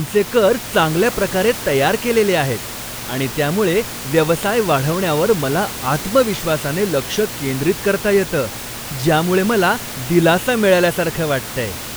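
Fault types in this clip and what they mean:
No faults are present.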